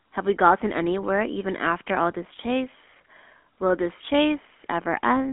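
Throughout, the speech has been coded with the GSM full-rate codec, consistent with 13 kbps, which rebuilds it from a vocal-tract model fed by sparse regular pulses. Confined to roughly 250 Hz to 3.4 kHz, the speech sounds thin, with a plainly buzzy, gravelly roughness.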